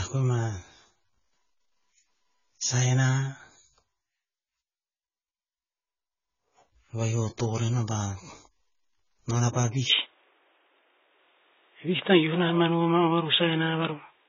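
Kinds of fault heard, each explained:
AAC compression: The whole clip has a dull, smeared quality, with a watery, warbling texture on vowels and fizzy sibilants. This is likely low-bitrate AAC-LC coding, which drops and roughly quantises frequency lines to save data. The damage is heavy, consistent with a rate around 16 kbps. A spectrogram would show a hard ceiling at 7 kHz, with patchy holes and blotchy noise-filled regions below it. The waveform would show nothing distinctive.
Input switched to a poorer device: At 9.90 s, right after "nonah pah", the sound suddenly turns boxier and narrower and stays that way to the end. There is no gap and little change in loudness. This is likely the recording input changing to a lower-quality microphone or headset profile. On a spectrogram the upper limit drops abruptly from 7 kHz to 3.8 kHz, with a faint new noise floor roughly 40 dB below the speech. 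The waveform envelope stays continuous across the switch.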